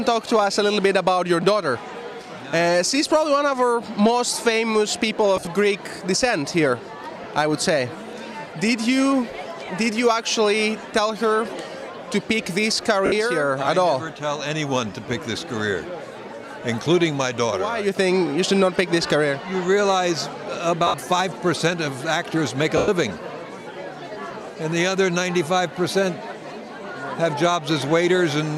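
Lost LE Audio frames hit at 5.37 to 5.47 s, 7.24, 9.65, 13.06, 20.87 and 22.77 s. The decoder fills each gap with recycled, randomised spectrum, so the sound briefly smears into noise, and the longest gap, about 110 ms, fades toward silence.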